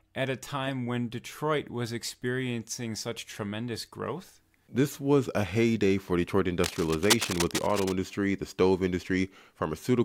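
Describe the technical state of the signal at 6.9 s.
Cable scratch noise runs from 6.64 to 7.92 s, covering the moment asked about, between "a heyday for detroit" and "the stove". The likely cause is a worn cable or connector being moved, so its contact resistance jumps about and injects dense, irregular bursts of noise into the path. It comes through as a rough scratching and rustling laid over the speech, sitting only a little below the speech level.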